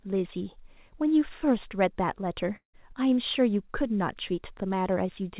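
Speech over a call path with nothing above 4 kHz, with a long network dropout from 2.56 to 2.75 s, likely from lost packets. The last sound smears into a fading buzz, then goes silent before resuming with audio missing. Unlike a short concealed glitch, the fill gives out and the gap is heard.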